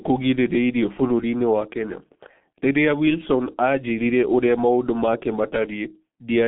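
Throughout, the speech carries heavy G.723.1 codec damage, fitting its 6.3 kbit/s mode: coarse 30 ms frames smear consonants and leave a hoarse, muffled tone. A spectrogram shows energy confined to roughly 150 Hz to 3.5 kHz, with nothing above 3.7 kHz.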